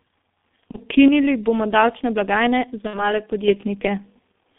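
The whole recording carries G.723.1 codec damage, and it is heavy. The speech is confined to a band of roughly 200 Hz to 3.6 kHz, so it sounds muffled and boxy. Consonants smear together. The voice has a hoarse, rough grain, which fits a very low rate near 6.3 kbit/s. The coder works in coarse 30 ms blocks and updates its model of the voice slowly, so fast changes blur.

At 0.71 to 0.77 s there is VoIP packet loss concealed by the speech codec. The gap sounds like one missing 30 ms frame. The decoder fills it by repeating its last pitch and spectral shape at falling gain. That gives a brief, fading smear. The voice takes a moment to recover after the stream returns.

From 1.08 to 3.48 s, one channel drops out. The speech suddenly falls by about 6 dB and then jumps back up. The likely cause is the loss of one stereo side before the mono mix. Material common to both sides loses half its contribution, which explains the clean 6 dB step.

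Inside that quieter stretch, at 2.87 to 3.15 s, there is a second concealed packet loss. It is longer, consistent with two frames, about 60 ms, gone. The concealment drags the last sound out as it fades. The distortion lingers past the gap before the speech settles.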